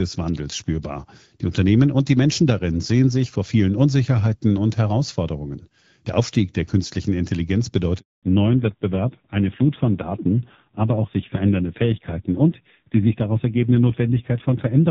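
Speech carried over a phone call breaks off with a handover gap from 7.99 to 8.23 s: the sound fades within a few tens of milliseconds and stays fully silent for 240 ms while the call switches networks. Unlike scattered packet loss, there is no concealment and no warbly filling, just one clean hole. From 8.23 s to the end, a fallback to narrowband removes everything above 4 kHz. The rougher, duller texture points to a low-rate narrowband codec near 5.9 kbit/s rather than a simple low-pass filter, contrasting with the lightly coded HD Voice before the gap.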